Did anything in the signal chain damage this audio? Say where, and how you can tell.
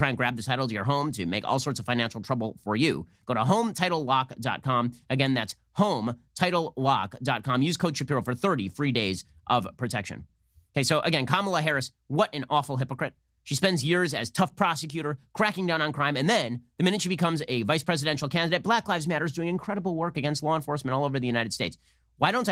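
No, nothing damaged it.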